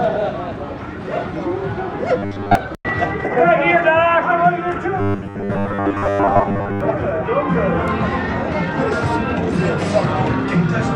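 Robotic sound from repeated short buffers at 2.18 to 2.55 s and 5.0 to 6.8 s: a fixed 100 Hz metallic buzz, likely a looping 10 ms buffer, not watery codec warble.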